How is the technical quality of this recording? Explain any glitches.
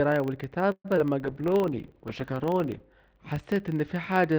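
The technical quality is compromised by three faults: a steady buzz running through the whole speech clip, and two brief disturbances within its first second.

A filter restarted on every block produces a low buzz at 25 Hz for the entire recording. Each processing block begins from silence, so a small transient marks every block boundary, and a 25 Hz rate fits blocks of 40 ms. The ticks grow and shrink with the loudness of the speech. That distinguishes this fault from mains hum, which keeps a constant level and sits at 50 or 60 Hz.

From 0.71 to 0.86 s there is a call audio freeze. The last sound is drawn out as a fading buzz that drops to about 60 ms of silence, and the speech then resumes exactly where it stopped. Packets held up in transit, which let the jitter buffer run dry, are the likely cause. About 131 ms of filler is inserted and nothing is lost, so everything after it is pushed later. 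That is what separates a freeze from a dropout, which removes audio.

At 0.96 to 0.99 s a short concealed packet loss appears as a quick smear. About 40 ms of speech never reached the decoder, and the receiver papered over the hole with only about 5 ms of extrapolated sound before blending back into the real audio. The timeline therefore closes up by roughly 40 ms, the opposite of the freeze just before it, and a brief sound may vanish here.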